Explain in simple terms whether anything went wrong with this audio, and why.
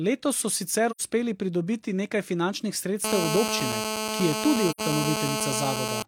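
A couple of things went wrong here. The first is AAC frame loss with muting, which happens twice: from 0.90 to 1.01 s and again from 4.70 to 4.80 s. Each time, a short chunk of the coded stream never arrived, and the decoder filled the gap with silence. The speech fades out and back in around a gap of roughly 85 ms, about the length of two lost frames, so you hear a soft-edged dropout.

The second is GSM phone buzz, starting at 3.04 s and running almost to the end at 6.03 s. A 2G phone nearby was on a call, firing out radio bursts about 217 times a second, and the audio circuitry picked those up and turned them into sound. The result is a harsh, raspy buzz at 217 Hz, nearly as loud as the speech itself. Because the phone was in a call, it stays nearly steady instead of coming and going.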